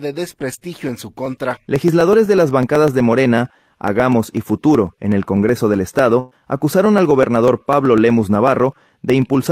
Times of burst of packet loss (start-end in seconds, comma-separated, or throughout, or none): 6.19-6.34